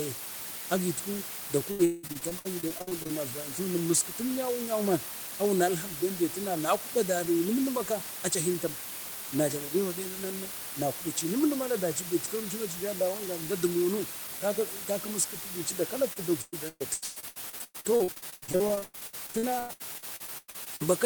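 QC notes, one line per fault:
Throughout: low bit depth with dither. The audio sits on only about 5 bits, and dither was added before rounding, so the quantisation error turns into a steady, even white hiss rather than gritty distortion. It's loud, too, roughly 10 dB under the speech, so the hiss never drops away. It's a flat, constant wash with no crackle and no pumping.
1.71 to 3.11 s and 16.13 to 20.82 s: repeated packet loss (robotic sound). Both stretches keep dropping out in quick succession, and each hole gets patched by stretching the last bit of sound forward, which gives that choppy, robotic texture with chunks missing. About 40% of each span is concealed. The longest holes run around 182 ms in the first stretch and 118 ms in the second, and the later one lasts much longer.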